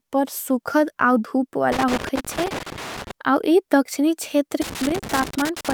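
A speech clip with two bursts of loose connector crackle: one from 1.72 to 3.11 s, ending just before "अव इ दक्षणी", and another from 4.62 to 5.73 s, right after "अव इ दक्षणी". Both sound like irregular scratchy crackle riding on the signal. That's what you get when a worn or dirty contact keeps making and breaking as the cable or plug shifts. The audio gets chopped in tiny bits, and any DC on the line turns each break into a little pop.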